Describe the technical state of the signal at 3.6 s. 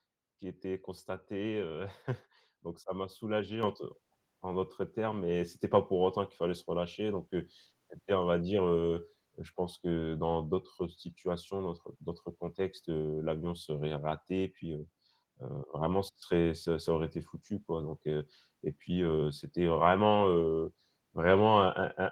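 At 3.63 s the microphone volume is stepped up: right after "ça m'a soulagé" and before "te en d'autres termes", the whole signal jumps by about 7 dB in a single step. The call software judged the input too quiet and raised the device's capture gain at once, so speech and background noise rise together, with no fade. The new, louder level then holds.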